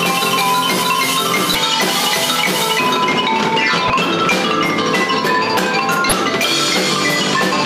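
At 1.52 to 1.55 s, 3.87 to 3.90 s and 6.09 to 6.12 s, the audio breaks up briefly. Each time the cause is damaged data in a compressed stream. Part of the encoded data was lost or overwritten. The decoder could not read those frames correctly. It lost its place and had to find the next valid frame. Each disturbance lasts about 30 ms. All three are cut off as the decoder locks back on.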